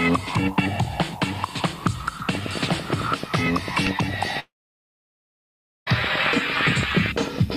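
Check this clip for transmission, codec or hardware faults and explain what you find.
Two faults stand out: a steady train of clicks through most of the clip and a long network dropout in the middle of it.

From 2.35 s to the end, a regular ticking runs over the sound at about 8.9 clicks per second, each pop peaking roughly 10 dB above the surrounding audio and still audible where the sound thins out. This train of clicks is likely pulsed interference from nearby equipment or a faulty connection or power supply, injecting near-identical spikes at a fixed rate on top of the program.

From 4.39 s to 5.88 s, the audio stops for nearly a second and a half. A brief decaying buzz carries on from the last sound, then gives way to silence for about 1.4 s before the sound resumes, with that stretch simply gone. The clicks continue through and past this gap. This long network dropout likely comes from a run of audio that never reached the receiver. 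The receiver extended the final fragment briefly, then muted until data arrived again, so the missing portion was skipped rather than delayed.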